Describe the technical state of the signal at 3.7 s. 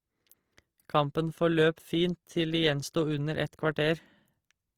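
At 3.7 s you're hearing what sounds like Opus compression, and it's there for the whole clip, not just that moment. The likely cause is an encode in Opus's CELT music mode at a low rate, something like 24 kbps. The encoder keeps each band's energy but, short on bits, patches bands with folded or noise-like content. So the speech stays full-bandwidth with few holes and little swirl, but it comes across grainy and rough, plainly audible rather than subtle.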